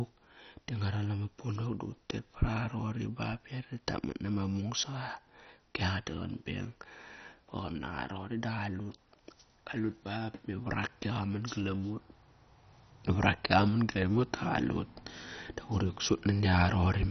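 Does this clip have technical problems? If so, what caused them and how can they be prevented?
Yes. The speech sounds dull and gurgly all the way through, with nothing above about 6.1 kHz and a grainy, watery smear. That's likely MP2 compression starved of bits, which fits a rate near 32 kbps. Upper sub-bands get dropped and the rest coarsely quantised. To prevent it, encode at a much higher bitrate or use a more efficient codec.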